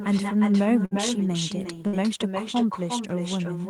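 From the start and throughout, an echo with no canceller shadows the speech: a copy about 7 dB quieter and thinner returns after roughly 0.4 s round trip. On a spectrogram each syllable's harmonics reappear faintly, shifted right by that delay.

A burst of packet loss strikes at 0.85 to 0.94 s and again at 1.87 to 1.96 s. Each time, the receiver stretches the last sound for about 55 to 58 ms as a decaying buzz or hiss, then skips 60 ms of speech. The waveform shows a tapering envelope, then an abrupt jump.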